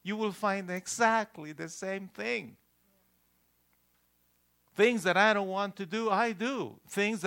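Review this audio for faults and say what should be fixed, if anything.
At 0.77 s, just after "you will find", an electrical switching spike adds a sharp snap peaking around -25 dBFS, likely from a nearby switch arcing into the audio line. To prevent it, keep switched mains equipment away from the signal cabling and use balanced, shielded connections.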